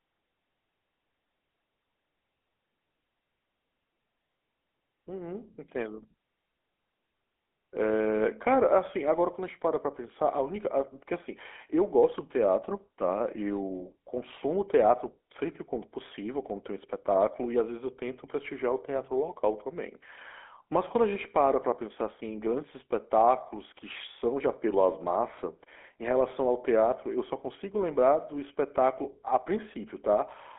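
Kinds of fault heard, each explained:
GSM full-rate codec: buzzy, gravelly roughness runs through the whole speech clip, with nothing above about 3.8 kHz, from an excitation coded as sparse regular pulses, which fits a 13 kbps GSM coder.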